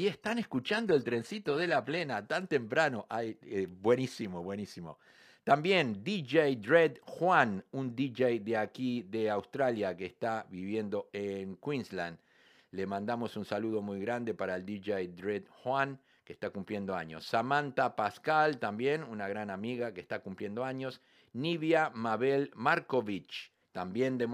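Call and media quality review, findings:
Adaptive stream starting at a low bitrate, 0.0 to 2.0 s. Treble missing or synthetic, stronger codec artefacts. Sounds like a 20 kbit/s HE-AAC rendition. Sudden clean step up, no gap, just before "tan temprano". Fits an AAC-LC 96 kbit/s rendition. Nothing above 14.9 kHz.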